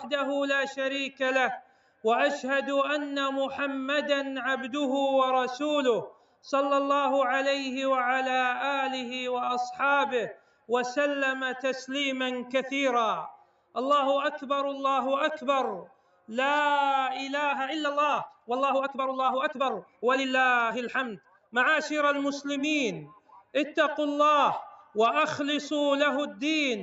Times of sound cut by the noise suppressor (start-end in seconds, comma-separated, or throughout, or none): 1.11-2.04, 6.11-6.44, 10.33-24.95